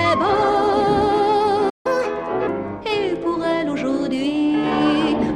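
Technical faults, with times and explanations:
1.69–1.86 s, playback stall: the sound just drops out for about 150 ms, likely because the player ran dry or its thread got blocked, then resumes.
1.86–2.47 s, catch-up at higher speed: the player races through its backlog at 1.25× speed, so everything jumps up about four semitones until it's caught up.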